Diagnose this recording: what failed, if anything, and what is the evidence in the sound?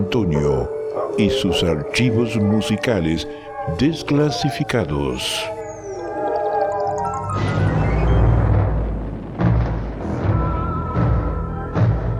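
Nothing failed; the recording shows no audible faults.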